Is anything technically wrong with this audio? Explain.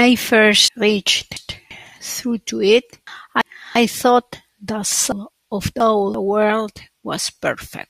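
Yes. At 0.68 to 1.71 s, 3.07 to 3.76 s and 5.12 to 6.14 s the speech briefly jumbles. These are chunks out of order: a 0.34 s chunk plays after the two chunks that should follow it (one in the middle case), so nothing is lost, only the sequence is wrong.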